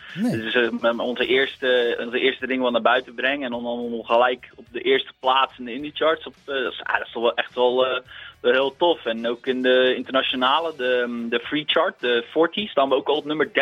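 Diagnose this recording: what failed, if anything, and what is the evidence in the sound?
At 7.92 s a brief glitch cuts through the sound, the signature of damaged data in a compressed stream, a codec-stage failure. The decoder misreads corrupted frame data, loses sync and hunts for the next header. A spectrogram shows a thin broadband vertical smear; the waveform shows a spiky discontinuity.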